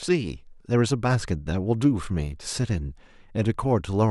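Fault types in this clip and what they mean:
Nothing here calls for a fault line: the speech comes across with no dropouts, clicks, distortion or other glitches to point to.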